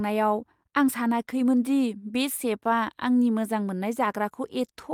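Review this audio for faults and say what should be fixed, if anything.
Nothing in the recording needs fixing, since no technical faults are audible anywhere in the speech.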